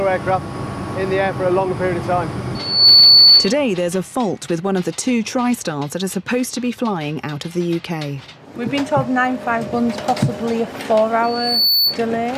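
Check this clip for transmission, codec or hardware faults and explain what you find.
Two bursts of loudspeaker feedback squeal are present. From 2.55 to 3.55 s a single 4.5 kHz tone swells over roughly a third of a second to about 15 dB above the programme. From 11.23 to 12.0 s the same tone rises more slowly and peaks near 5 dB above. Microphone-to-speaker loop gain exceeds one at that frequency. Unlike a steady interference whine, it grows from nothing.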